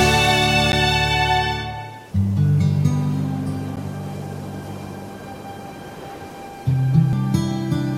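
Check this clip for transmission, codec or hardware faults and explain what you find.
Two faults turn up, each more than once. There are two blocks of digital silence, at 0.72 s and 3.76 s. Each is a 10 ms run of zeros where the output buffer likely went unfilled in time, so the sound drops straight out and back in. That is heard as a tick or a dip. Unlike a decoding fault, nothing new is added; the sound simply stops.

Damaged data in a compressed stream shows up at 2.12 s, 5.09 s and 7.13 s. Corrupted bytes made the decoder misread frames and hunt for the next valid header. Each spot gives a chirp or click.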